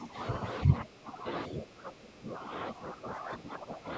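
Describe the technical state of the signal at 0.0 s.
Speech suppressed in double talk occurs from 0.0 to 0.18 s. The speech drops by roughly 15 dB, likely because an echo canceller could not tell this talker from loudspeaker echo while both sides spoke, and turned everything down.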